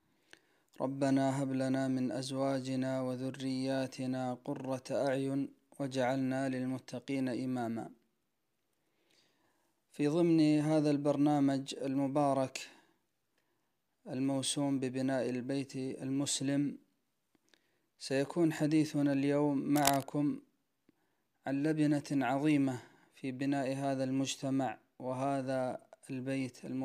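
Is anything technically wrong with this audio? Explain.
Yes. Cable scratch noise, 19.73 to 20.03 s: a worn connector likely moved, contact resistance fluctuating rapidly, adding scratching bursts nearly as loud as the sound.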